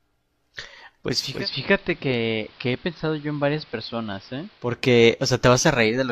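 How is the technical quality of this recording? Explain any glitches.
The recording has one clear glitch, a stretch where the broadcast drops out of digital.

From about 1.05 s to 4.84 s the speech goes through a digital radio blending to analogue. The receiver lost the digital stream and crossfaded over roughly 436 ms to the station's AM signal, then came back. On AM, the treble is cut, so the speech turns dull and boxy. It also drops about 4 dB and picks up a hiss roughly 25 dB down.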